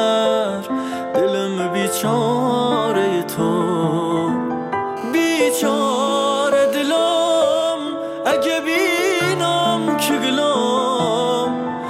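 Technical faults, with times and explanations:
4.97 to 7.71 s, GSM phone buzz: a hard, raspy buzz at about 217 Hz, dense with harmonics and sitting roughly 21 dB under the sound. A nearby 2G phone on a call pulses its transmitter at that rate, and the audio circuitry rectifies those bursts, so the buzz holds steady and ignores the programme.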